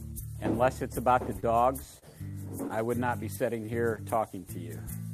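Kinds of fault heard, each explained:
Short stall from a late packet: at 1.40 to 1.45 s and again at 3.96 to 4.00 s, a packet arrived after its playout time and the jitter buffer ran dry. The receiver held the last sound for about 20 ms each time until the packet turned up, then carried on from the same point. Nothing is lost, but the sound is briefly stretched with a slight buzz or dip, and everything after plays about 20 ms later.
Short concealed packet loss: at 1.99 to 2.04 s and 3.66 to 3.70 s, roughly 20 ms of audio never reached the decoder. The receiver covered each gap by extending the preceding sound, about 31 ms of synthetic fill at the first point and 19 ms at the second, then crossfaded back into the real signal. Each appears as a brief smear or wobble where a small piece of sound has been replaced rather than played.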